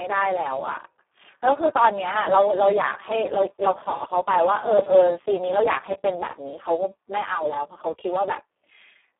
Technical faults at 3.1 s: Speex codec

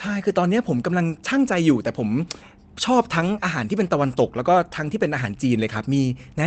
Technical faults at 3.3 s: lost packet rebuilt from error correction

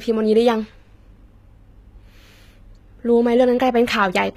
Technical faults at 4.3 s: HE-AAC compression

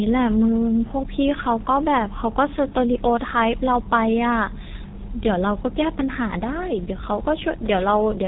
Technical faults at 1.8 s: G.723.1 codec

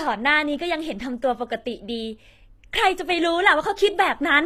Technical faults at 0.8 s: HE-AAC compression

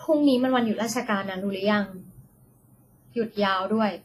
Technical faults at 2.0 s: WMA compression

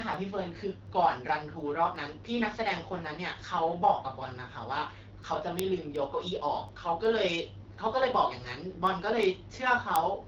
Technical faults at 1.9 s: AMR wideband (HD Voice) codec; word clock ticks

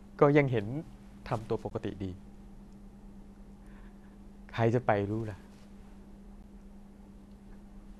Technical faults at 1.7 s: gap at a join of encoded pieces

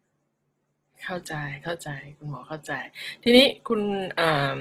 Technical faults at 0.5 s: Opus compression

